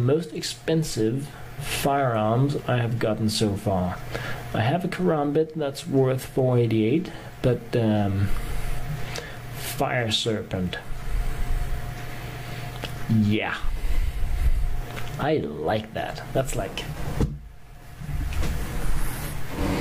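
No technical faults can be heard anywhere in this audio. Nothing in the recording calls for a timestamp or an explanation.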